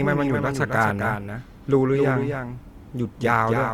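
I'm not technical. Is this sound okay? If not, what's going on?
No. The speech is heard twice all the way through. A second copy follows about a third of a second behind, a little quieter, with no fading tail. This doubled audio track is likely caused by the sound being recorded twice, once through a slower path.

The sound also has a rough, grainy, noisy texture. Tones lose their smoothness. This points to Opus compression, likely squeezed hard to save data, so some detail was replaced with noise-like filler.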